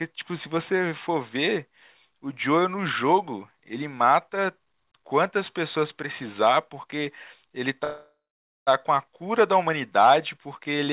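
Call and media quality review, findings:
Call audio freeze, 7.84–8.69 s: last sound held as fading buzz, then about 0.5 s silence; audio resumes where it stopped, nothing lost. Likely jitter buffer underrun from delayed packets; adds 0.83 s delay. Narrowband path, nothing above 4 kHz.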